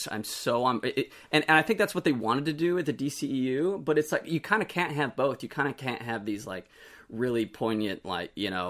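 A speech recording with no technical faults to report: the signal holds together throughout without any audible defect in its capture, transmission or playback.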